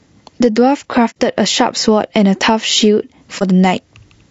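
From start to finish, the level is pulled down on every loud sound, a swing of around 15 dB. This is gain pumping, likely from input gain set far too high with a fast limiter clamping down on each peak. Loud and quiet passages end up squeezed toward the same level. On a waveform the envelope looks flattened.

Throughout the clip, the speech is also rough and grainy, which is plainly audible low-delay AAC compression, consistent with AAC-ELD at a bitrate around 32 kbps. The short analysis frames of this low-delay coder cannot separate closely spaced pitch harmonics well, so noise fills the space between them and the top band sounds thin and synthetic. A spectrogram shows smeared, blurry harmonic lines with a hazy noise floor between them and a coarse, patchy upper band.

At 1.10 to 1.16 s the sound fades out and back in, leaving a soft-edged gap of about 60 ms. This is AAC frame loss with muting, consistent with two lost frames that the decoder replaced with silence. 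The overlapping windows taper the edges. The same fault happens again at 3.38 to 3.43 s, this time a shorter gap of about 30 ms, consistent with a single lost frame. On a waveform each gap shows as a tapered dip to near zero. On a spectrogram it is a blank vertical band across all frequencies.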